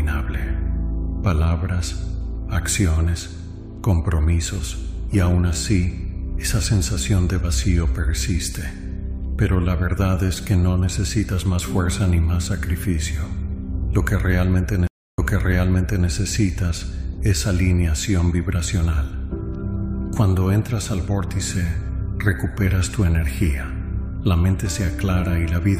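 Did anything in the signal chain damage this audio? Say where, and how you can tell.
Yes, at the network stage. At 14.87 s there's a stream reconnect: 0.3 s of silence, then the sound resumes 0.91 s earlier, replaying a stretch until 16.08 s. The link dropped, a fresh decoder started, and the server resent a burst.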